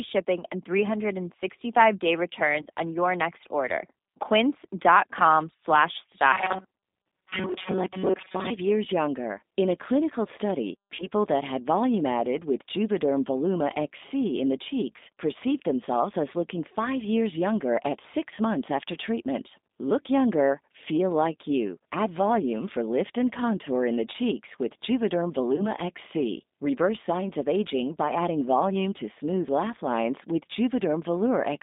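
From the start, the whole recording runs through a G.729 codec, which rebuilds the speech from a vocal tract filter, a pitch predictor and a few pulses per frame. The band is only 200 Hz to 3.7 kHz, and the sound is plainly rough, gritty and synthetic, which fits a low-rate call link of around 8 kbit/s.

VoIP packet loss concealed by the speech codec occurs at 2.62–2.66 s, 7.64–7.71 s, 10.95–11.07 s and 25.56–25.68 s. About 40 ms of audio went missing at the first and third points, and 20 ms at the others. Each time, the decoder stretched its last pitch and filter at falling gain, so the speech smears into a brief buzzy tone or coloured noise that fades and stays weak just past each gap.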